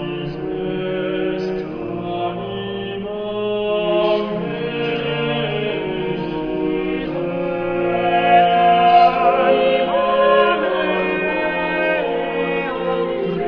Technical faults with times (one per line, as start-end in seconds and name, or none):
none